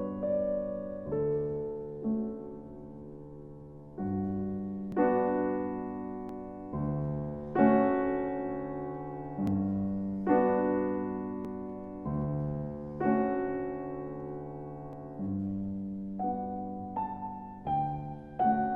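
At 4.92, 6.29, 9.47 and 11.45 s the audio jumps abruptly, as if about a fiftieth of a second had been cut out and the edges butted together; at 14.93 s a longer piece, around fifty milliseconds, vanishes the same way. These are likely dropped buffers (overrun): samples were overwritten in the hardware before being read, so the stream skips forward with no gap of silence.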